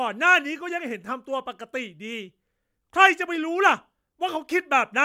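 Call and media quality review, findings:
Nothing to flag here, as the speech came through without any audible trouble worth a ticket.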